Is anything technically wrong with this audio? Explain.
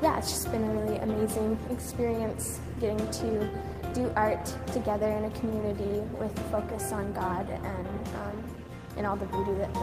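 No, nothing stood out as technically wrong on listening to this audio.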